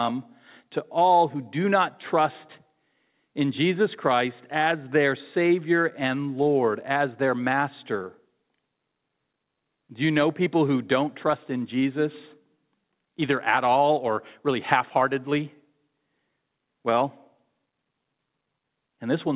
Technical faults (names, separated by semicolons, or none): none